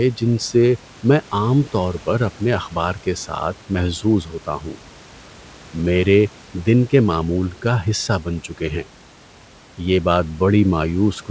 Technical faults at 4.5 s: speech cut by the noise suppressor

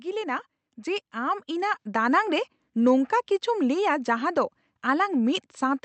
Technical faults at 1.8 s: automatic gain rising

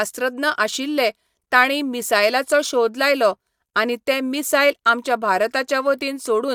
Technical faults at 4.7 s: none

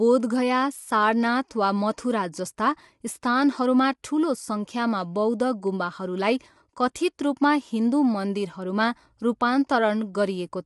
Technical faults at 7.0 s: low-delay AAC compression; pre-echo

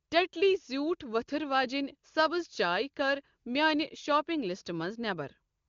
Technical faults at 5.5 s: none

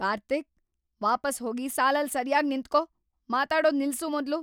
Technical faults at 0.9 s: clock slip clicks

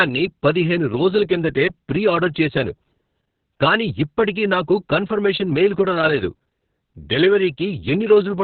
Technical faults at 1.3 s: Opus voice compression

